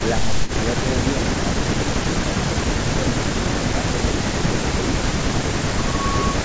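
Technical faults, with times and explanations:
0.41 s, 2.23 to 2.48 s, 3.41 to 3.98 s, 4.21 to 4.40 s and 5.63 to 5.86 s: speech suppressed in double talk. The level drops briefly, by about 10 dB at its deepest, in short pieces totalling roughly 70 to 300 ms per event, the longest near 3.4 to 4.0 s. This is likely the echo canceller treating overlapping far-end activity as echo and attenuating the near-end speech along with it, so the speech thins and dips in chunks.
5.31 to 6.44 s: loudspeaker feedback squeal. A steady tone at 1.1 kHz rises over roughly 0.7 s until it sits about 5 dB above the speech, and it continues to the end of the clip. The microphone is picking up the loudspeaker it feeds, and the loop gain at that frequency exceeds unity. The tone keeps reinforcing itself on each pass through the loop, which is why it swells into a single sustained pitch instead of fading.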